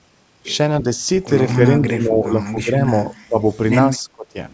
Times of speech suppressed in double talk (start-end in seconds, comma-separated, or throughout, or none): 0.81-0.85, 1.68-2.74, 3.11-3.38, 3.98-4.36